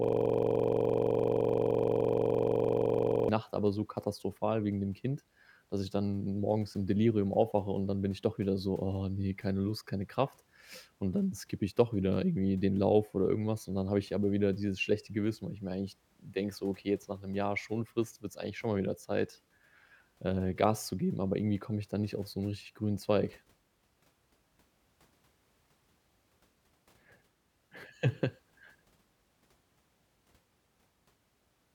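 From the start of the clip to 3.29 s, a system hang loop is already under way. The system stalled while the audio hardware kept replaying one 42.67 ms slice of the ring buffer, which fits a 2048-sample buffer. It repeats 76 times at 23.4 Hz, giving a rapid, rough buzzing stutter.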